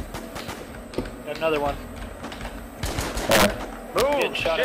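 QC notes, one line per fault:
3.31–3.46 s and 3.99–4.22 s, integer overflow: samples pushed about 6 dB, then about 1 dB, past the integer maximum wrap to the opposite sign instead of limiting, producing violent cracks far sharper than clipping.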